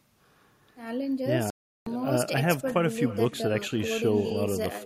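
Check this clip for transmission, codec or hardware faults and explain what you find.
Two faults are present: an uncancelled echo running through the whole speech clip, and a gap in the output partway through.

Echo with no canceller is present throughout. The far end's loudspeaker feeds its microphone and nothing removes that copy, so each phrase returns roughly 300 ms later at about 18 dB below the speech. It sounds thinner. On a spectrogram, every speech burst is trailed by a fainter duplicate shifted right.

A Bluetooth dropout runs from 1.50 to 1.87 s. The output falls silent for about 0.36 s and then resumes as though the sound had carried on underneath. This is likely the result of wireless packets arriving too late and being discarded, and a hole that long fits roughly 17 of them. The waveform shows a flat gap.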